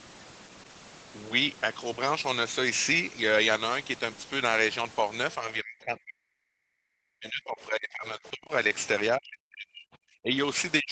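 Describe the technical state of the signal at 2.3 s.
At 2.3 s the speech is intact, with no dropout, glitch or distortion, only the band limit near 8 kHz that comes from the call's microphone processing and codec.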